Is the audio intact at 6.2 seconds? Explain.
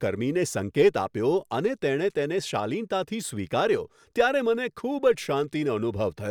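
Yes, at 6.2 seconds the speech plays through intact, with no dropout, click, distortion or other fault audible at that moment.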